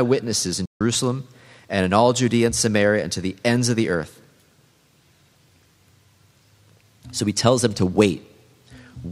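Speech with a playback stall from 0.66 to 0.81 s: the sound stops mid-flow for about 150 ms, then resumes. On the waveform it is a flat line; on a spectrogram, a blank vertical band. The player likely ran short of data or was briefly blocked.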